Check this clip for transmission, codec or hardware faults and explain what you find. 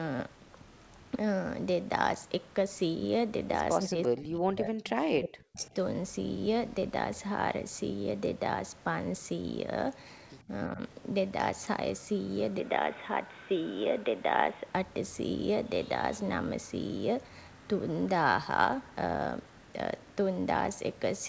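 Three kinds of fault are audible in the speech, all in the first 15 seconds, against a call path whose band stops at 8 kHz.

Speech suppressed in double talk: Between 3.88 and 5.75 s the voice dips and breaks up for about 1.5 s in total, sinking by up to about 40 dB; a milder dip of about 10 dB follows at 10.69–10.8 s. Both sides were likely talking at once, so the echo canceller attenuated the near talker along with the echo.

Echo leak: Faint, delayed scraps of voice surface at 4.03–4.08 s, about 20 dB under the speech, and at 5.62–5.67 s, about 30 dB under. Each lags its source by 341 ms, likely loudspeaker sound the far end's echo canceller failed to remove and sent back.

Input switched to a poorer device: From 12.6 to 14.74 s the voice turns dull and boxy, though loudness stays the same and no gap marks the change. A faint new noise floor, about 55 dB down, appears. The input likely switched to a narrower-band microphone or headset profile, then back.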